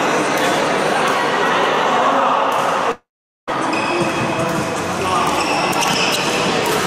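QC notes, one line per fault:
2.91 to 3.49 s, long network dropout: the sound smears into a short fading buzz, then 0.43 s of silence, and returns with 0.56 s lost, likely from stalled packets.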